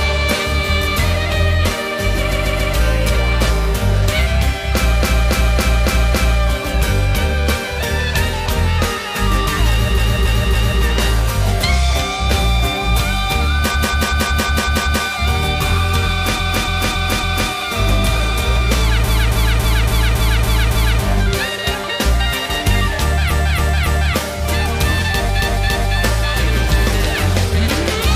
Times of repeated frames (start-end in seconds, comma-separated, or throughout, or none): 2.28-2.70, 4.97-6.37, 9.94-10.78, 13.70-15.01, 16.35-17.46, 19.04-20.99, 23.27-24.11, 25.36-25.92